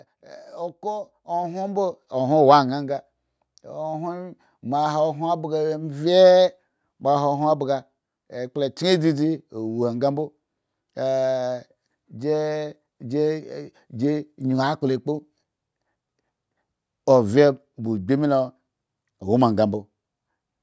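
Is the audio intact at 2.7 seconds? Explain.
No, 2.7 s falls inside an automatic gain rising stretch from 0.22 to 6.05 s. The gain control judged the input too quiet and pushed it up about 9 dB, so voice and background swell together.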